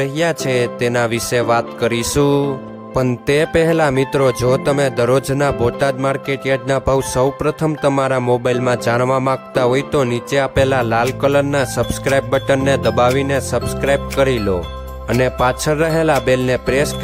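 No technical fault is present anywhere in the audio, and the signal holds steady throughout.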